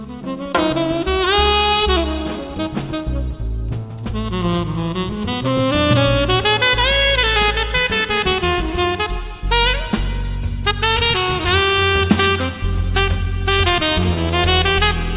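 No technical faults can be heard anywhere in this audio. There is no event to time or explain.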